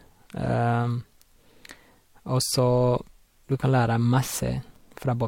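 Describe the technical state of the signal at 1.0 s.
At 1.0 s the speech signal is intact, with no audible technical fault.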